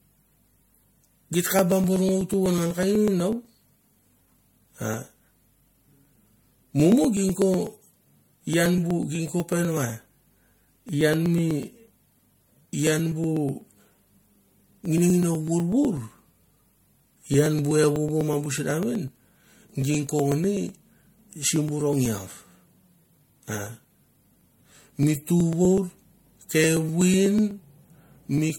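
From start to finish the speech carries generation loss: it sounds swirly, hollow and smeared, with consonant attacks blurred beyond what a single 64 kbit/s MP3 would cause. The likely cause is repeated decoding and re-encoding, around four passes, each quantising on a shifted frame grid so the noise and gaps accumulate. On a spectrogram the energy stops sharply at 16.6 kHz, and speckled holes and smeared patches run through the upper bands.

From 0.10 s to 28.50 s there are periodic USB or driver dropouts, a steady train of roughly 200 tiny losses spaced every 0.124 s. Each time, about a millisecond of audio is skipped outright rather than replaced by silence, as if a background task stalled the bus or driver at a fixed rate. They are heard as regular ticks while there is signal. The waveform shows small discontinuities at evenly spaced points, and the spectrogram shows faint vertical broadband lines at the same spacing.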